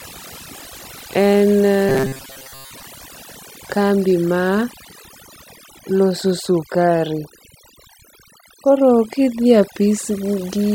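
Throughout the speech, overdone noise removal leaves near-silent gaps sprinkled with twinkling specks, unlike plain low-pass dulling, which keeps the background hiss. From 1.89 to 2.83 s, the speech becomes robotic sound from repeated short buffers: a rigid metallic 134 Hz buzz, likely from a roughly 7.5 ms chunk replaying over most of the span, unlike dropouts, which leave gaps.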